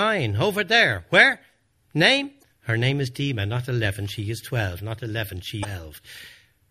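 Throughout the speech there is plainly audible MP3 compression damage, likely from encoding at a low bitrate, which fits about 64 kbps. Weak frequency components drop in and out between frames, giving a watery, swirly quality and smeared consonant attacks.

At 2.39 to 2.44 s and again at 5.61 to 5.65 s, damaged data in the compressed stream produces brief glitches. The decoder misreads the corrupted frames, loses sync and searches for the next valid frame header.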